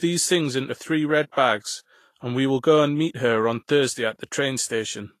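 Throughout, the speech sounds grainy and hissy up top, with nothing above 14.2 kHz. That's likely Vorbis compression, coarsely quantising the treble detail into noise.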